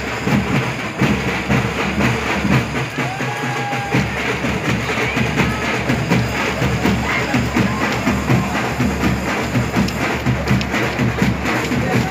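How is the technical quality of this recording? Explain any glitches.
No glitches can be heard anywhere in this recording. Nothing breaks into the sound at any point, and there is no fault to explain.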